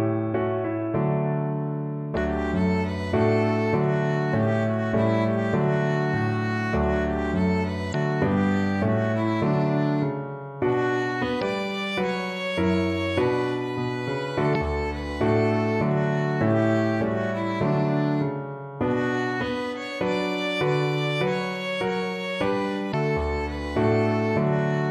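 Damaged data in a compressed stream produces five brief glitches, each about 40 ms, at 2.13, 7.91, 11.38, 14.51 and 22.90 s, where corrupted frames break decoder sync.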